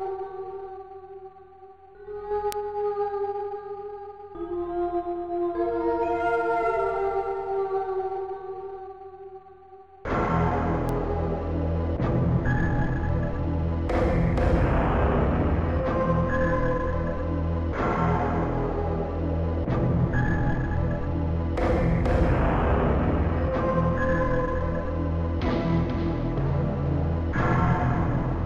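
Bit error spikes, where single bits flipped in memory or on a digital link, corrupt the audio twice: at 2.52 s, consistent with two adjacent samples jumping to about -8 dBFS, and at 10.89 s, consistent with one sample reaching about -14 dBFS. Each is heard as one sharp broadband tick unrelated to the surrounding sound.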